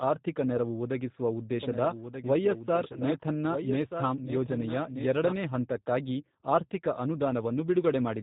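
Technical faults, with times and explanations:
Throughout, G.729 codec: The speech has the slightly rough, synthetic texture of this 8 kbit/s VoIP codec, and the damage is plainly audible. The decoder rebuilds each 10 ms frame from a vocal tract filter, a pitch predictor and a few sparse pulses, so fine detail between harmonics is lost. Nothing above 4 kHz passes, which leaves the audio dull and narrowband. The character fits the reduced-complexity G.729A variant.
1.63 to 5.33 s, doubled audio track: Starting just after "ಆರ್ಥಿಕ ನೆರವು ಒದಗಿಸುವ", a second full-band copy of the speech runs underneath, trailing by roughly one and a half seconds and about 10 dB quieter. It switches on and off abruptly and ends just before "ಹಂತಕ್ಕಾಗಿ ಆರ್ಥಿಕ". It has no decay or room colour, so it is not reverb. The likely cause is a second, slower capture path or an edit holding two copies out of step.
2.93 to 3.03 s, VoIP packet loss concealed by the speech codec: A 20 ms gap in the stream, which points to a single lost packet, was filled by the decoder extrapolating from its last pitch and filter settings with falling gain. 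The result is a brief, fading stretch of extrapolated sound in place of the missing sound. Each frame is built on the state of the previous one, so the speech stays weakened or distorted for roughly 80 ms after data resumes, out to about 3.03 s.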